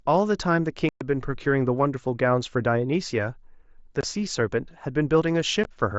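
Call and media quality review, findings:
Unconcealed Bluetooth headset packet loss on the headset-to-phone link: voice frames lost in transit and replaced by silence, with no concealment. The speech has abrupt-edged gaps at 0.89–1.01 s (120 ms), 4.01–4.03 s (22.5 ms) and 5.64 s (15 ms). Wideband mSBC audio surrounds each gap.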